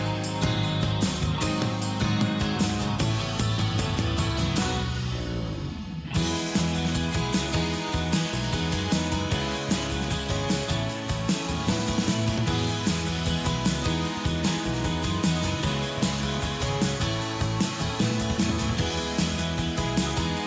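No technical faults can be heard anywhere in this audio.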